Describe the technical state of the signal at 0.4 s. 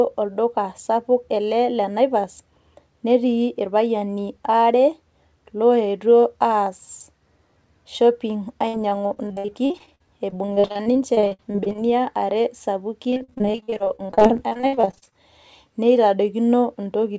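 At 0.4 s the signal is intact, with the speech passing through the WebRTC call path as expected, its G.722 coding leaving nothing above 8 kHz.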